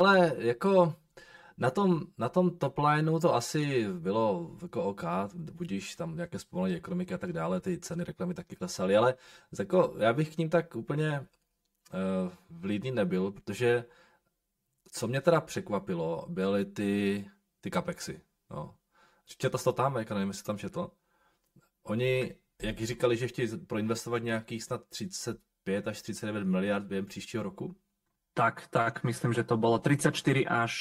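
Speech runs through the whole clip with a hollow, phasey colour. The fault is channel delay, heard as comb filtering. One channel arrives about 5 ms behind the other, and the two are summed to mono. Content common to both cancels at evenly spaced frequencies. The first notch falls near 100 Hz, and further notches repeat up the spectrum. The notches stay fixed. The voice sounds hollow from start to finish.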